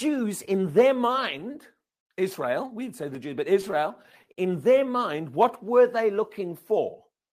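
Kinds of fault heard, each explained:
Repeated stalls (stutter): from 3.61 to 4.39 s, packets reached the receiver more slowly than playback, so the jitter buffer ran dry eight times. Each gap, at most 48 ms, was filled by continuing the preceding speech, 116 ms in all (15% of that stretch). Nothing is lost, but the speech drags and stutters.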